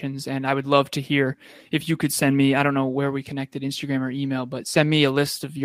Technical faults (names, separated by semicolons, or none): none